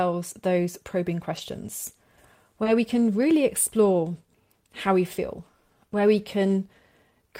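Around 1.37 to 1.39 s there's a lost packet rebuilt from error correction. One 20 ms packet went missing, but the next one carried a low-bitrate backup copy, and the decoder played that instead. You don't get a hole. You get a very brief patch of speech that sounds rougher and grainier than its surroundings, because that stand-in frame is coded far more coarsely than the real one.

Then from 2.63 to 2.67 s there's a short concealed packet loss, with another error-correction rebuild right on its tail. About 20 ms of audio never turned up in time, so the receiver extended the previous sound for around 18 ms, carrying on its pitch or shaped noise, and then crossfaded out. That stretch comes across as a quick smear or wobble, and any short consonant sitting there can get swallowed.

Within that same span, from 2.65 to 2.67 s, a second single packet was lost but recovered from its redundant copy. 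So the concealed smear hands straight over to another 20 ms of noisier, lower-fidelity speech before the real stream resumes.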